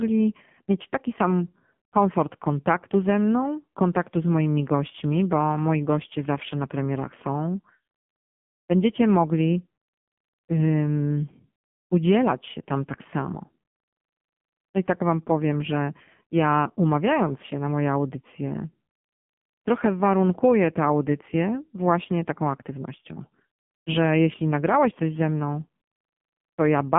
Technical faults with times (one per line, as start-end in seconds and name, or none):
0.00-26.98 AMR narrowband mobile codec